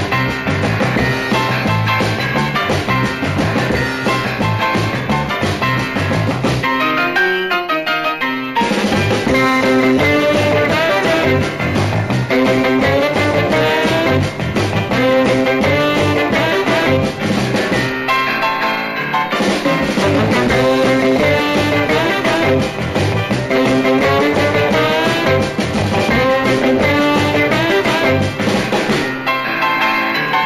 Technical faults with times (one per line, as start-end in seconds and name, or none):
0.00-30.45 imaging from linear upsampling